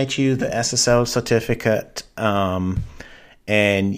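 Nothing in this audio stood out as a technical problem on listening.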